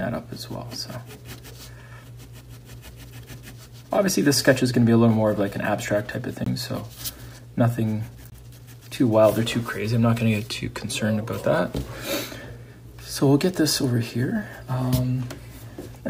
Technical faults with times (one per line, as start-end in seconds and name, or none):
6.44-6.46 block of digital silence
8.30-8.32 block of digital silence